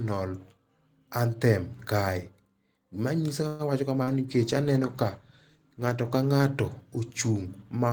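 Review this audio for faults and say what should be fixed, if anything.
A call audio freeze runs from 3.47 to 3.62 s. Delayed packets likely drained the jitter buffer, so 119 ms of fading continuation was inserted and later audio arrived 119 ms late. A deeper jitter buffer on congested links would prevent this.

Short concealed packet loss occurs at 4.03 to 4.10 s. About 40 ms never reached the decoder and was replaced by a brief extrapolated smear. Forward error correction or redundant packets would recover such losses.

A call bitrate drop lasts from 4.33 to 6.93 s. The encoder fell from 32 to 17 kbps for about two seconds, making the speech coarse and duller. A steadier bandwidth estimate with a higher minimum bitrate would avoid it.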